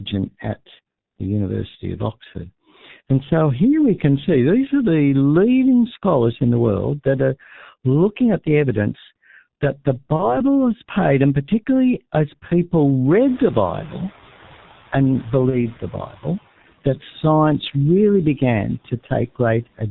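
Throughout the clip the speech carries the sound of the G.723.1 codec, and the damage is heavy. Its 30 ms frames and very low bitrate, which fits roughly 6.3 kbit/s, leave only a coarse model of the voice. Nothing comes through above 4 kHz. The voice sounds muffled and hoarse. Consonants smear together because the model updates too slowly to follow quick changes.

From 10.16 to 10.38 s there is VoIP packet loss concealed by the speech codec. The gap fits a single lost 30 ms frame. The decoder filled it by repeating its last pitch and filter at falling gain. That stretches the sound into a brief buzzy tone or coloured noise that fades. The voice then stays weak and distorted for about 0.2 s, because each new frame is rebuilt from the faulty one before it.

From 13.28 to 16.36 s the noise suppressor is catching up. Room noise jumps by about 25 dB around 13.5 s. The suppressor's estimate of that noise lags behind. 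So the noise first passes with little reduction, then sinks by about 9 dB over roughly 3 s as the estimate adapts.

Inside that stretch, at 15.50 to 15.57 s, another packet loss is concealed the same way. It is again one 30 ms frame, heard as a short buzzy tone or coloured noise.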